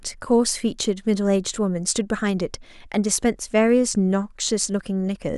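No technical faults can be heard anywhere in the speech. Nothing in the recording calls for a time mark or a closer look.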